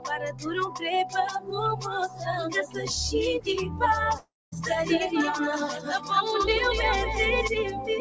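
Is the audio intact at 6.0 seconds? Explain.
No. From 5.76 to 6.11 s the sound sinks sharply, dropping by as much as about 9 dB, so whatever is sustained there fades and its decay is cut short before the level recovers. This is sound cut by the noise suppressor: a suppressor tuned for speech judged this steady or fading material to be noise and pulled it down harder than its surroundings, leaving a hollow dip around 6.0 s.

That dip sits within a wider problem, a noise suppressor applied to music or sounds, which runs through the whole clip. The level swings by roughly 10 dB, pumping, fluttering or thinning out as held portions and tails are attenuated while sharper onsets pass. The processor is treating sustained tones and ambience as background to remove. Beneath this, the dull top end, with nothing above 8 kHz, points to the G.722 call codec at 64 kbps.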